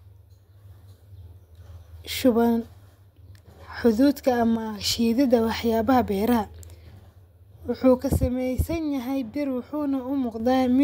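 A speech recording with two sudden level drops of about 6 dB, from 4.56 to 4.81 s and again from 8.00 to 10.40 s. The likely cause is one channel dropping out, so only half of the mono sum remains. Unlike a gain change or fade, the step is instant and the sound never goes silent, and anything that was carried only by the lost side vanishes rather than merely getting quieter.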